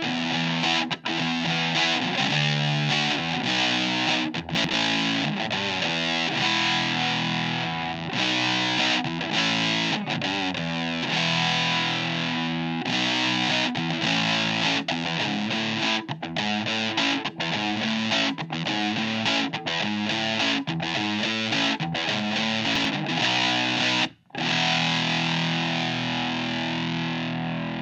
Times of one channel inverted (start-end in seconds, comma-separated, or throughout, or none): none